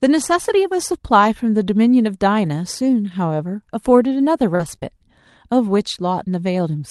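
A speech recording carried over an Opus call path, with nothing above roughly 12 kHz, which fits super-wideband coding. It has two kinds of packet fault. The first is a lost packet rebuilt from error correction. At 2.45 to 2.47 s a single 20 ms frame was missing, and the decoder played the low-bitrate copy carried in the next packet. The same thing happens across 4.59 to 4.73 s, where four packets give 80 ms of rebuilt audio. Nothing drops out in either place, but those stretches sound rougher and noisier. On a spectrogram the harmonics there look blurred and the spaces between them fill with grainy noise. The second fault is short concealed packet loss, around 4.55 to 4.61 s (about 40 ms), then 4.75 to 4.79 s and 4.79 to 4.83 s (20 ms each). The decoder never received this audio, so it extended the preceding sound and faded back into real signal, which is heard as a brief smear or wobble.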